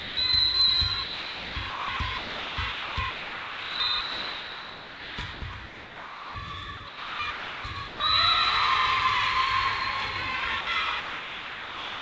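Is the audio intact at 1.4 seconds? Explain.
No. From 1.04 to 6.35 s the sound turns choppy, with about 4 s swapped for comfort noise, likely sound chopped by the voice detector repeatedly gating transmission.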